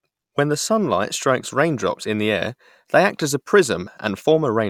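No technical faults are audible anywhere in this speech recording.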